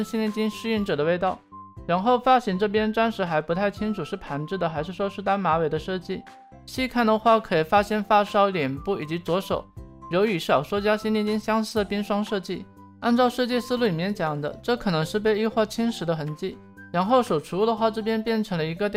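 From 0.97 s to 6.59 s, de-emphasis applied wrongly: a treble-cut curve lands on material that had no matching pre-emphasis, so the response rolls off smoothly above the midrange, about 8 dB down at 10 kHz relative to 1 kHz. The sound turns dull and muffled.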